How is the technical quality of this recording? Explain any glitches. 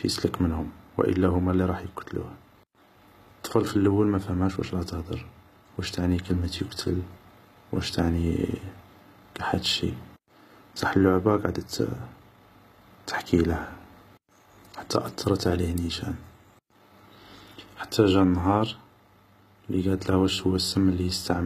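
The speech is noticeably degraded throughout by HE-AAC compression, likely at a very low bitrate around 20 kbps. The treble above the core band is rebuilt by copying lower bands upward, so sibilants sound gritty and lispy, and nothing remains above 14.9 kHz.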